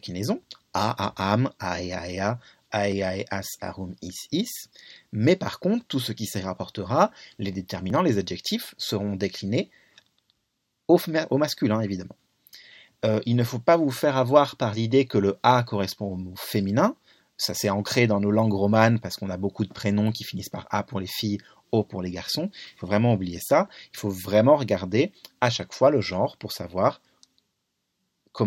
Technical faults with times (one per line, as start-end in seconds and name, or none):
7.90 audio missing between chunks
17.86 audio missing between chunks